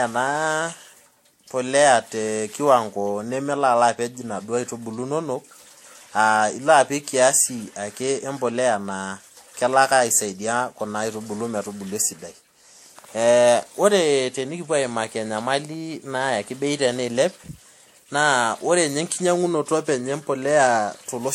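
Throughout the speech, two distinct kinds of swirling, smeared artefacts sit on top of each other, and nothing reaches above 16.5 kHz. The likely cause is transcoding between lossy codecs. The sound points to a Vorbis encode re-encoded as WMA, each adding its own damage.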